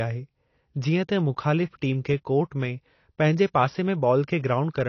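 From start to finish the speech has likely passed through AAC compression at a low rate. The encoder appears to have discarded everything above 6.6 kHz and quantised the remaining spectrum coarsely, a pattern that fits AAC-LC at roughly 24 kbps. The missing top end makes the speech dull and muffled, and the coarse quantisation leaves plainly audible codec damage: a smeared, warbling texture on sustained sounds and sibilants.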